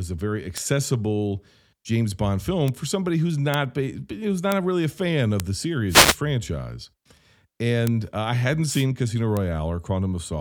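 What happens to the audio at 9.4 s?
At 9.37 s a bit error spike cuts through the speech as one sharp tick. It lasts a single sample. One bit in a stored or transmitted sample value has flipped. The value jumps by a power of two, reaching about -8 dBFS, then returns at once to the waveform. That lone impulse carries energy across the whole spectrum. It has no relation to the surrounding speech, so it sounds like a dry, isolated click.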